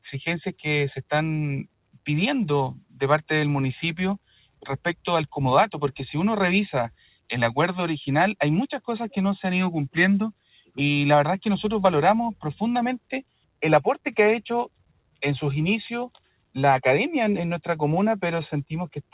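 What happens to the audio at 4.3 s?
At 4.3 s the sound sits inside a dip from 4.18 to 4.65 s where the noise suppressor cut it, mistaking it for noise and pulling it down by about 21 dB at its deepest. On the waveform the envelope collapses for roughly half a second, and the spectrogram shows a faded band with an abruptly shortened decay.

That dip rides on a broader fault present throughout, a speech noise suppressor left on non-speech audio. It treats steady content as noise and swings its gain by around 10 dB, so the level pumps and thins. The spectrogram shows sustained energy flickering in strength while onsets stay bright, all below the 4 kHz ceiling of the G.711 call path.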